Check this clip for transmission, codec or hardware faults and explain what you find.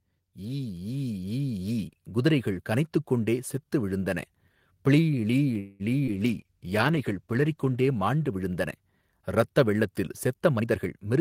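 Three transmission faults are audible in this speech clip: a gain ramp near the start, a brief stall in the middle and a hurried stretch at the very end.

Automatic gain rising, 0.38 to 2.74 s: the automatic gain control judged the incoming level too low and pushed its gain up by about 8 dB over more than two seconds. Because the whole signal is amplified, voice and background noise swell together, so the opening gradually gets louder before the level settles by "கொண்டே செத்து விழுந்தன".

Call audio freeze, 5.59 to 5.82 s: right after "ப்ளீ ளீ" the sound hangs for about 0.2 s as a drawn-out, buzzy continuation of the last sound rather than dropping to silence. This is likely a delivery stall that emptied the jitter buffer, so the receiver stretched out the last sound until packets resumed. Nothing is lost: the speech resumes where it stopped, now about 0.2 s later.

Jitter buffer speed-up, 10.59 s to the end: after "இரத்த வெள்ளத்தில்" the receiver was holding more buffered audio than it aims for and trimmed the excess by cutting out many tiny pitch-period slices, roughly 150 ms in total. 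The result plays at about 120% speed with unchanged pitch, so the final words sound rushed.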